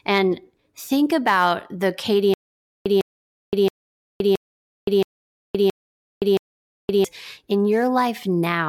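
Speech breaks into a stutter with silent gaps from 2.34 to 7.04 s: a 153 ms fragment repeats seven times, each followed by 519 ms of dead silence, likely a stalled stream replaying its last buffer.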